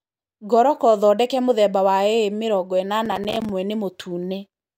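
From 3.06 to 3.49 s the speech breaks into processor overload crackle: about twenty missed deadlines on buffers of roughly 5 ms, each leaving a hard-edged silent gap. Unlike a single dropout or steady digital noise, it is a gritty burst of tearing that stops once the load passes.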